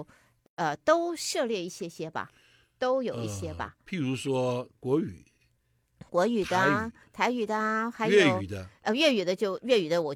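Separately encoded pieces of this speech were joined without trimming the encoder delay and final-frame padding, leaving a gap at a join of encoded pieces. At 0.46 s the sound drops out for about 119 ms, with smeared edges, then resumes where it stopped at 0.58 s.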